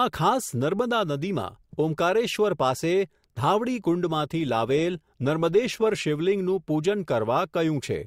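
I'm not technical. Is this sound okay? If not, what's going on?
No. Adaptive stream at a lower bitrate, from 4.03 to 6.03 s: the speech suddenly turns rougher and more processed, then recovers. The stream briefly switched to a smaller, more heavily squeezed version of the audio, likely because the connection slowed, without leaving any gap.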